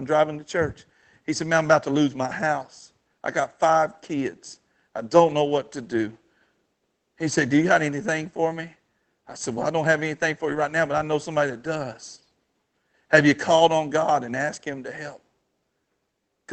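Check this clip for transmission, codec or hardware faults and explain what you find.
One transmission fault stands out, a short patch of speech rebuilt from error-correction data. The underlying Opus call path, at 24 kbps with content reaching up to 8 kHz, carries the rest of the clip.

From 10.43 to 10.61 s, right after "I don't have anything" and just before "now but I know", there is a lost packet rebuilt from error correction. Five separate packets went missing, and the decoder filled the hole with the lower-bitrate backup copies carried in the packets that followed. About 100 ms of audio came from those copies, which fits five 20 ms packets. No gap is heard; that stretch sounds briefly grainier and hissier. The waveform stays continuous with no dropout. On a spectrogram the harmonics blur and a raised noise haze fills the spaces between them for that fraction of a second.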